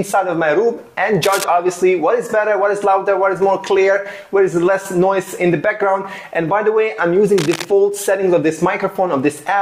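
Two brief bursts of scratchy, rustling noise cut across the sound, from 1.23 to 1.44 s and from 7.37 to 7.65 s, each about 10 dB below the signal. This is cable scratch noise, likely from a worn cable or connector being moved.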